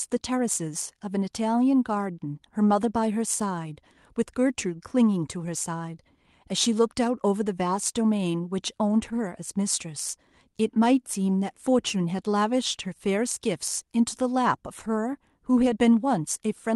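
No technical faults are audible anywhere in this recording.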